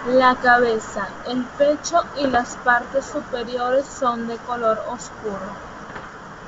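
Bit errors on an ADPCM link strike at 2.20 to 2.39 s and again at 5.88 to 6.17 s. Around 0.4 and then 0.5 percent of bits flip, and each error throws off the decoder's step size and predictor, so pops and rough, level-jumping bursts ring through the wideband speech.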